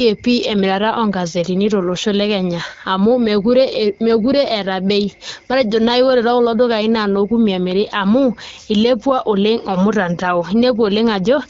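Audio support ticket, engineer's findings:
No faults found in this speech audio; the AMR wideband (HD Voice) path at 12.65 kbit/s is working normally, with only light codec coloration audible.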